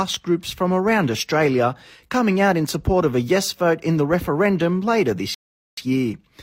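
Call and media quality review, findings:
Rebuffering stall at 5.34 to 5.77 s, right after "vote in the referendum". Speech drops to silence, then resumes where it stopped, with nothing lost. About 0.43 s added. Component: playback buffer. Mechanism: player drained its downloaded audio and waited for more before continuing.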